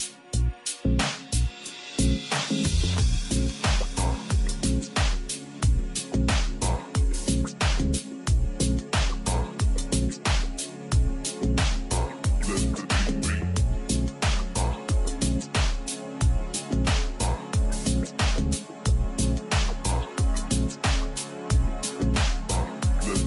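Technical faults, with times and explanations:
Throughout, wrong sample rate: everything runs at about 0.73 times normal speed and sits roughly 5.55 semitones low, so the whole clip drags and sounds sunk. The ratio fits 44.1 kHz material played back at 32 kHz without any conversion.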